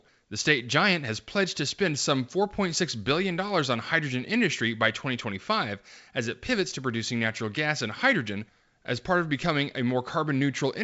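Nothing in this speech recording stood out on listening; it comes across as ordinary G.722 wideband telephone audio at 64 kbit/s, with its content stopping at about 7.7 kHz.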